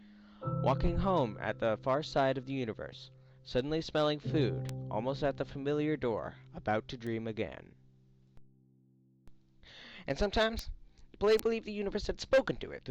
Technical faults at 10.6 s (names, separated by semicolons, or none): bit error spike